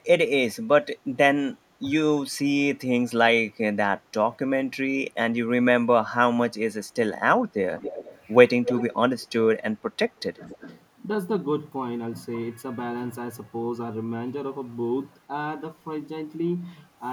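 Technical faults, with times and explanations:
0.49–0.56 s and 0.82–0.86 s, speech suppressed in double talk: the speech briefly dips, by about 15 dB and then about 10 dB, likely because the echo canceller mistook overlapping talk for echo.
7.78–8.24, 8.64–8.95, 9.19–9.27 and 10.18–10.22 s, echo leak: a copy of the speech returns 228 ms late, from about 35 dB to about 5 dB below the direct sound, likely from loudspeaker pickup the canceller missed.
10.34–10.68 s, speech suppressed in double talk: a deeper dip of about 20 dB lasting roughly a fifth of a second, likely suppression triggered while both ends were active.
10.47–10.58 s, echo leak: within that dip, the 228 ms delayed copy comes through again at about 20 dB below the speech, likely leaking past the canceller.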